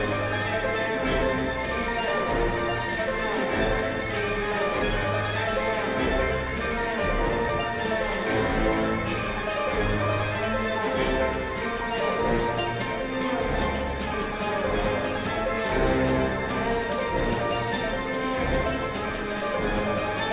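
No technical faults can be heard in this audio, so there are none to describe.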